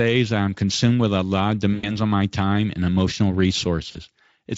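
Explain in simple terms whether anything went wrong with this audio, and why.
Twice the speech turns into a brief stretched, smeared sound that fades: from 1.73 to 2.01 s, after "with a lot of", and at 3.91 to 3.98 s, after "my time and emotional". This is VoIP packet loss concealed by the speech codec. About 100 ms and then 40 ms of audio went missing, and the Speex decoder filled each gap by stretching the last sound it had.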